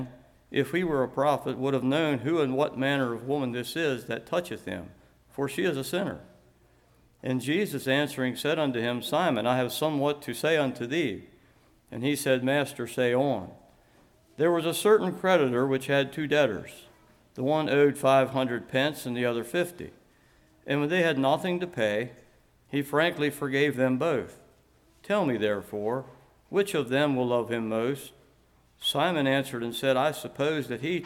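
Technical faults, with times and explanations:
Throughout, sample clock jitter: the converter's timing wobbles by a microsecond or two, so each sample lands a little early or late. Steep, bright passages suffer most, leaving a faint hiss around 40 dB below the sound that disappears in quiet gaps.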